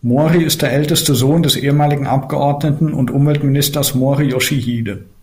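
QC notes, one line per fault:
No fault found, so there is nothing to log in these QC notes.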